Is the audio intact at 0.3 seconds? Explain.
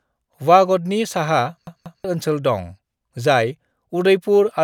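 Yes, the speech at 0.3 seconds is intact, with no dropout, click, distortion or other fault at that moment.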